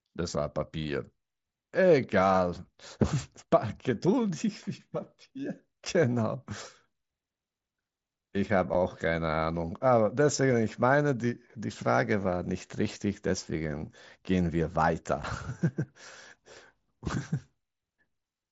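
Unconcealed Bluetooth headset packet loss at 8.74 s and 15.23 s drops about 7.5 ms of speech, fitting one lost mSBC frame, leaving abrupt gaps.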